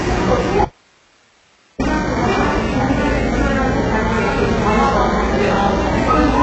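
A recording of everyday sounds with a dull, smeared top end throughout: nothing reaches above 8 kHz, and the treble that remains sounds gritty and metallic, its overtones not lining up with the body of the sound. That points to heavy HE-AAC compression as the likely cause, at a very low bitrate that fits something around 8 kbps. The codec keeps only the lower band and fakes the treble by copying lower bands upward. From 0.65 s to 1.80 s the sound cuts out abruptly for about 1.15 s, leaving only faint hiss far below the normal level before it snaps back. This is an audio dropout to a faint residue, likely caused by the signal being lost upstream while the path after the break stayed live.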